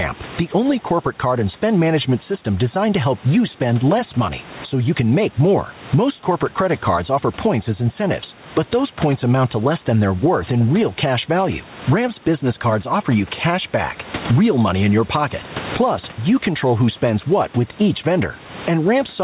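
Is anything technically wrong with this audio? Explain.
Yes. Gain pumping runs through the whole clip. The input gain is likely set far too high, so a fast limiter pulls it down on each loud syllable. The gain swings by around 15 dB. Loud and soft parts sound squashed together. The sound stops at 4 kHz, which fits a G.711 A-law call codec.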